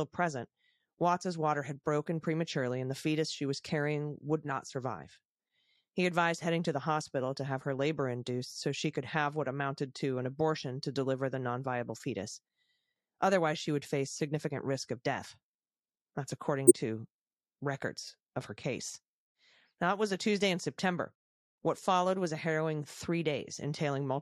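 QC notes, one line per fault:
16.67–16.72 s, corrupt frame decoded: a short, loud glitch lands just before "to records of her", peaking at roughly -5 dBFS. It sounds like a single compressed frame got some bits flipped and the decoder played it anyway. The garbled gains and codes throw energy into the wrong frequencies for about the length of that one damaged frame, which is why it's so brief.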